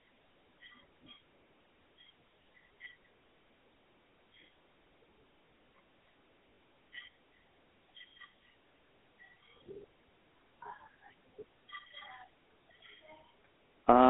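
From start to finish, the speech runs through a GSM full-rate codec, the first GSM voice coder. It models the vocal tract as a filter and drives it with a sparse train of regularly spaced pulses, keeping only every third excitation sample. The band is telephone-narrow, roughly 250 Hz to 3.4 kHz, with nothing above 3.8 kHz. The damage is plainly audible. Voices take on a buzzy, gravelly roughness, which fits a 13 kbps rate.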